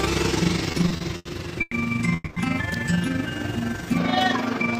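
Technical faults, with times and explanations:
Throughout: overlap-add ripple, frames rejoined with overlap that doesn't sum to constant gain, so level swells and dips about 6 dB roughly twenty times a second, a rough flutter.
0.71 to 1.74 s: repeated stalls (stutter), packets repeatedly arrived late and the buffer emptied five times, longest wait 110 ms, so the sound drags and stutters with nothing lost.
2.14 to 2.38 s: call audio freeze, likely a delivery hold-up that emptied the jitter buffer, so the last sound is stretched over about 220 ms, then resumes where it stopped.
2.74 s: electrical switching spike, likely a nearby switch or discharge arcing into the line, heard as a sharp snap or tight cluster of clicks laid over the sound.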